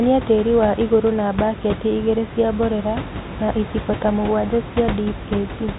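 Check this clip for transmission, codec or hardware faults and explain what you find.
Nothing in the recording stood out on listening as a transmission, codec or hardware problem.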